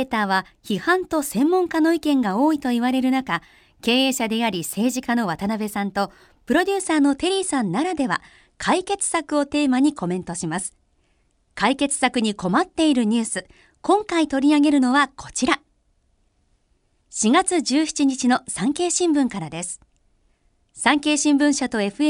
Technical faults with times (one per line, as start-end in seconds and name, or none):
0.00-6.80 imaging from linear upsampling